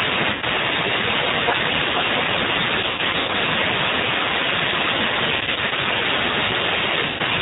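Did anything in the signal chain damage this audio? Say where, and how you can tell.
Yes. G.729 codec throughout the speech: a plainly audible rough, synthetic quality with nothing above 4 kHz, as the 8 kbit/s codec rebuilds each frame from a filter and a few pulses.

VoIP packet loss concealed by the speech codec, a network-stage fault, at 0.33 to 0.44 s, 2.80 to 3.30 s, 5.35 to 5.73 s and 7.07 to 7.22 s. The decoder stretches the last pitch into a fading buzz, and the sound stays weak briefly afterwards.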